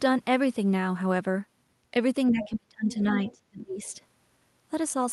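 From 2.31 to 2.93 s the talker's speech sinks sharply, at its deepest by about 35 dB, and again from 3.21 to 3.81 s by about 25 dB, each time for roughly half a second in total. This is likely speech suppressed in double talk: with both sides speaking, the echo canceller turned down the near talker along with the loudspeaker echo. Inside and around those dips, faint scraps of another voice come through at 2.42 to 2.53 s, about 15 dB below the speech, at 2.92 to 3.04 s, about 20 dB below, and briefly at 3.28 to 3.32 s, about 25 dB below. That is likely the other side's voice leaking through, residual loudspeaker echo that the canceller failed to remove from the microphone.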